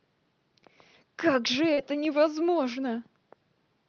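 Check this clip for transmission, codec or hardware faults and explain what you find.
There's one transmission fault, a short concealed packet loss in the call path, whose Opus coding tops out around 8 kHz. From 1.73 to 1.79 s, about 40 ms never arrived in time; the receiver extended the previous sound and blended back, leaving a brief smeared wobble.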